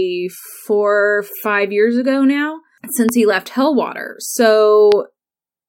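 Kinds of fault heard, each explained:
Loud pop: two sharp single pops stand out above the speech at 3.09 s and 4.92 s, roughly 10 and then 15 dB above it, with the speech carrying on beneath; each is likely a brief voltage spike, from static or a switch, added to the signal.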